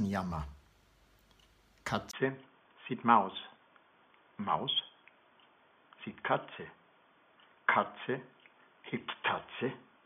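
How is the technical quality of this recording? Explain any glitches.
The recording has one clear fault, lasting from 2.11 s to the end: the input likely switched to a poorer device. At the switch the capture briefly drops out for about 20 ms, and afterwards the system is feeding from a narrower-band input with nothing above 3.5 kHz. The sound turns abruptly dull and boxy at roughly the same loudness, with a faint new background noise far below the signal.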